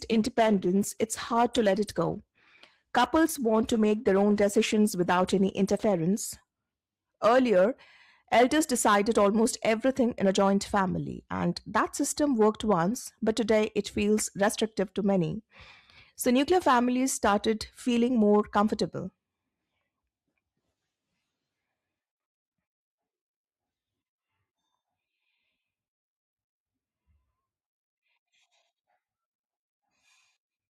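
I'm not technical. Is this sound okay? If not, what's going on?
No. For the first 6 seconds the speech sounds dull and smeared, then sharpens abruptly with no gap. This is an adaptive stream starting at a low bitrate: the player began on a reduced-quality version to start quickly, then switched up.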